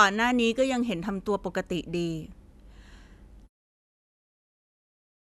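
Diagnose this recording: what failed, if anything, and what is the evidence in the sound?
Nothing in this speech recording points to a failure at any stage; the only change worth noting is a smooth, deliberate-sounding fade-out near the end, starting at about 3.5 s, which is ordinary editing and not a fault.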